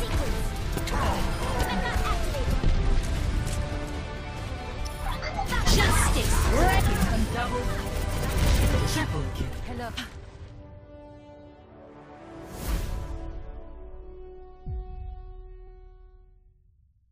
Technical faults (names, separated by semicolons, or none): compressed frames skipped